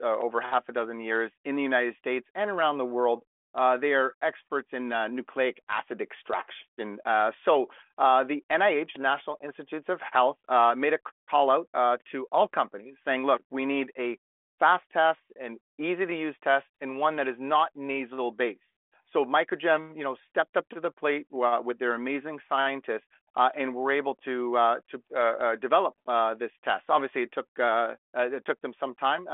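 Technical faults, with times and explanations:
No technical faults are present: the speech runs over a telephone-band path coded as G.726 ADPCM at 40 kbit/s, which passes roughly 300 to 3400 Hz with nothing above 3.8 kHz, and at that rate its coding leaves at most a faint trace.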